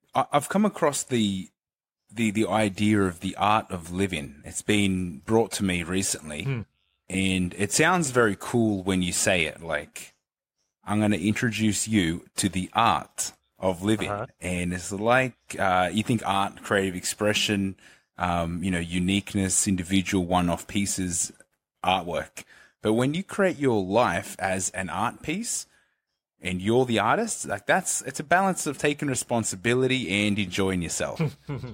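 No technical faults are audible.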